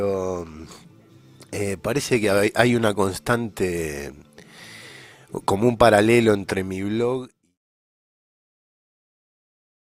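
Nothing stood out on listening; the only notable change is an editor-style fade-out that begins around 6 s and is complete by 7.6 s.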